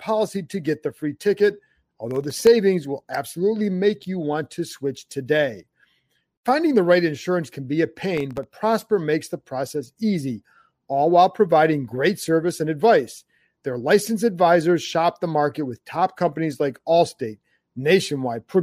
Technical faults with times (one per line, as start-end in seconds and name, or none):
2.11-2.47 processor overload crackle
8.17-8.43 processor overload crackle